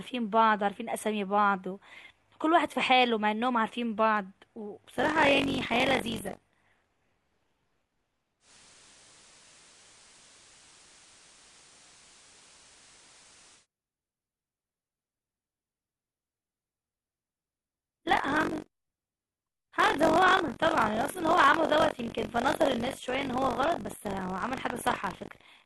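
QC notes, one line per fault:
4.97–25.65 s, buffer tearing: a steady robotic rattle at 46.9 Hz, which fits a 1024-sample buffer. About a fifth of each buffer replays audio roughly 40 ms old, with hard joins. Unlike dropouts or clicks, it buzzes regularly and only while speech is present.
8.40–13.67 s, digital radio blending to analogue: a 134 ms cross-fade to FM brings in hiss around 30 dB below the speech and shifts level by about 6 dB, then fades back. Unlike a codec fault, the whole band and noise floor change together.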